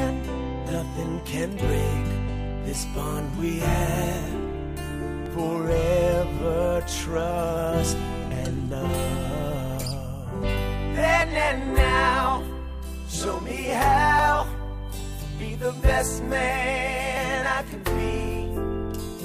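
Audio missing between chunks, most likely from a recorder or processor dropping a sliver of around 20 ms each time it hands over between blocks of about 3 s, cuts out sound at 2.29, 5.26, 11.22, 14.19 and 17.17 s. Each joins straight across, heard as a brief skip.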